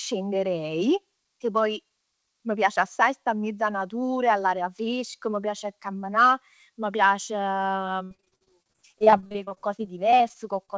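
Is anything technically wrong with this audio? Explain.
Yes. From 8.04 to 10.70 s, repeated packet loss (robotic sound): frequent gaps of up to 66 ms are filled by extending the previous sound, giving choppy speech with pieces missing.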